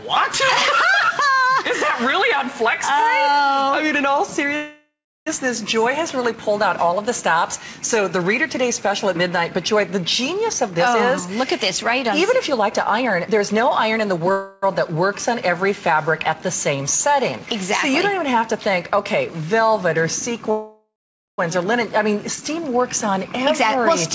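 Passed through a call path whose wideband codec leaves nothing above 8 kHz, consistent with G.722, the audio has call audio freezes at 4.56–5.29 s, 14.31–14.64 s and 20.51–21.40 s, where the last sound carries on as a fading buzz or hiss. The first and third freezes fall silent for 0.33 s and 0.48 s, and the second has no silent stretch. Afterward the audio resumes where it stopped, with nothing lost, likely because delayed packets emptied the jitter buffer. Jitter buffer speed-up follows at 10.63–11.59 s (112%, about a tenth of a second cut), 12.11–14.31 s (115%, about 0.3 s cut) and 23.08–24.09 s (104%, a few hundredths cut). Unlike a freeze, which adds time, these run faster at unchanged pitch as repeated pitch-period snippets are removed, so the first two sound hurried.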